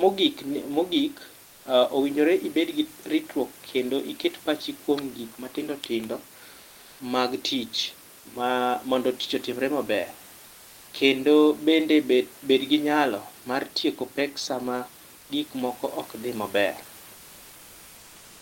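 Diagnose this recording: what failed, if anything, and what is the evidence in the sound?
Codec stage: comfort noise in place of the background at 1.47–1.63 s (before "onegore ibed gi ritruok"), 10.47–10.87 s, and 15.19–15.27 s (between "mar tieko pek sama" and "gik moko ok dhi"). The room noise turns flat, featureless and about 1–2 dB quieter, likely from Opus DTX synthesising noise during pauses.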